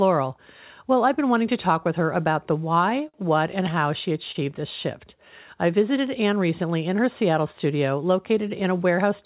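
At 3.08 to 3.16 s and 4.32 to 4.37 s, short stalls from a late packet hold the sound for about 52 ms and 29 ms, with a slight buzz or dip. Nothing is lost.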